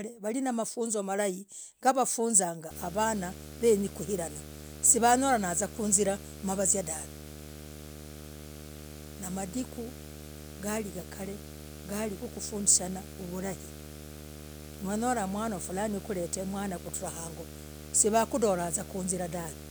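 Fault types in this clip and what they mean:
Video or display buzz: A screen or video cable is leaking into the audio path. From 2.70 s to the end, a buzz at the 75 Hz field rate sits under the speech with hash above it. It is fairly strong, roughly 15 dB below the speech.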